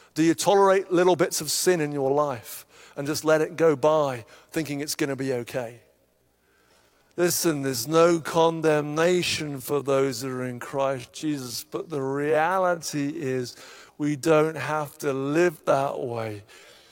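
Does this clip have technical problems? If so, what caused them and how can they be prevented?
Yes. From 5.70 s, right after "it's going to be", through to the end of the clip, there is a time-stretched section: the speech abruptly slows to about 0.58 times its original pace while the pitch stays the same. The slowed stretch drags, as short fragments of the waveform are repeated to fill the extra time. The likely cause is software lengthening the audio to fit a target duration. To prevent this, adjust the edit or timeline to suit the recording's natural length.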